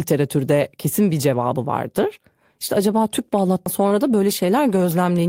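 A CD skip comes at 3.65 s, right after "acaba tüp". A jolt or flaw sent the laser to a different turn of the disc's spiral, so the player muted for a few milliseconds and resumed elsewhere. The result is a tick and an abrupt jump in the speech.

Short concealed packet loss follows from 3.89 to 3.93 s. Part of the stream arrived too late to decode, and the receiver patched the gap by extending the preceding sound for about 15 ms before blending back into real audio. It is heard as a brief smear or wobble in the speech.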